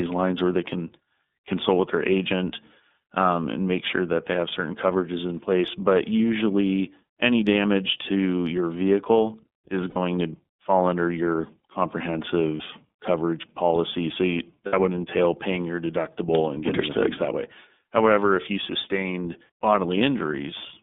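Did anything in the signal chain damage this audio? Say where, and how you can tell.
Yes. Throughout, the speech is band-limited to roughly 200 Hz to 3.6 kHz and has a plainly audible rough, slightly synthetic grain. That points to the codec stage: the iLBC codec, likely in its 13.33 kbps mode with 30 ms frames. Each frame's excitation is coded independently, with nothing above 4 kHz.

At 9.9–9.97 s, 12.57–12.62 s and 14.67–14.74 s the sound briefly freezes into a held, buzzy, breathy tone and then recovers immediately. These are lost iLBC frames from the network stage, about 60, 30 and 60 ms long. The decoder repeated the last pitch cycle mixed with noise.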